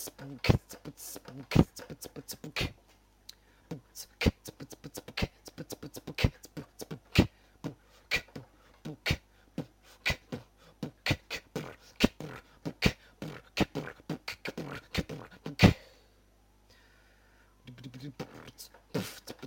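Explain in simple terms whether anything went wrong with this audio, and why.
Nothing went wrong with this audio. There are no dropouts, glitches or other problems to point to anywhere in the recording.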